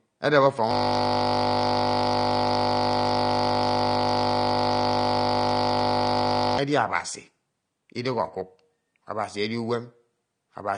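Speech clip. Between 0.71 and 6.58 s the system hung while the sound hardware kept cycling its ring buffer, a system hang loop: one 20 ms piece of audio repeats hundreds of times, heard as a steady buzz at 50 Hz in place of the speech. Throughout, the sound is likely damaged by low-bitrate AAC compression, which fits roughly 32 kbps: nothing remains above 9.7 kHz, and coding damage is plainly audible as dullness and smearing.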